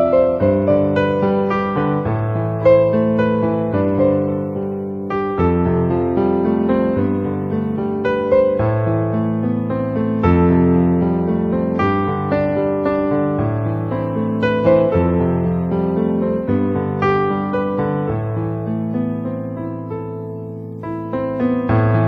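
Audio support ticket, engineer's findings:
No audible faults found on review.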